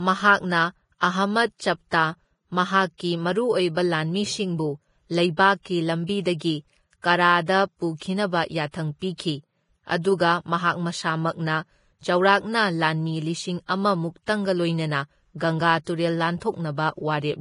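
Speech throughout, with nothing above 10.5 kHz and a hissy, grainy treble where fine detail has turned to noise, blurring consonant attacks; the heavy damage is likely Vorbis compression, and it fits a low bitrate of around 28 kbps.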